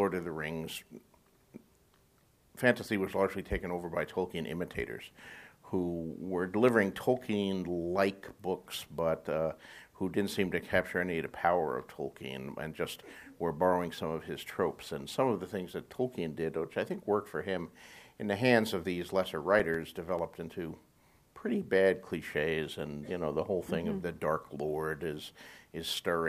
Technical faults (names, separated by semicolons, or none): CD scratch ticks